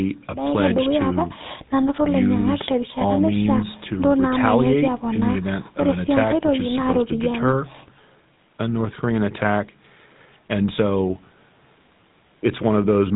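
Speech runs through the whole clip with a plainly audible buzzy, gravelly roughness, and nothing is heard above about 4 kHz, giving a dull, telephone-band sound from start to finish. That is GSM full-rate codec damage, and the character fits the 13 kbps full-rate mode. The codec models the vocal tract as a filter and excites it with a coarse, regularly spaced pulse train that keeps only every third sample, which produces the grainy buzz.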